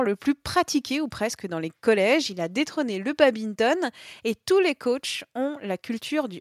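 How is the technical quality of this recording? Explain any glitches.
No glitches or technical faults are audible anywhere in the recording.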